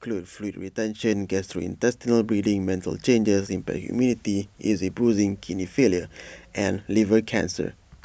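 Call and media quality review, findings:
Microphone volume stepped up at 1.02 s. Speech and background noise jump together by about 5 dB in a single step. Component: capture-side automatic gain control in the call software. It judged the input too quiet and raised the device input volume at once. No ramp smooths it. Level holds at the new setting afterwards.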